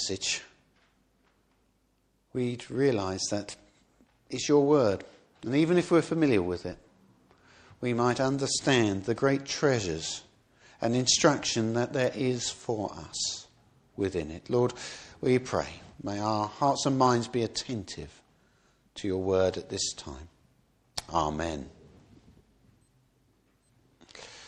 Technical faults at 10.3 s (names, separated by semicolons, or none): none